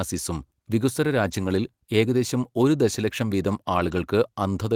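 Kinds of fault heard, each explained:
Lost packet rebuilt from error correction, at 1.23 to 1.53 s and 3.75 to 4.01 s: the speech carries on without any gap, but about 160 ms and 140 ms of it turn rough and grainy, which fits runs of lost 20 ms packets. Each missing packet's audio was filled in from a low-bitrate backup copy carried inside the packet that followed it, so the decoder played that coarser version instead of leaving silence.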